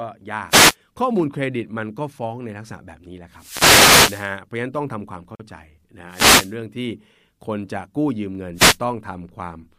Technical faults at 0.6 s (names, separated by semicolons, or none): wireless microphone noise hit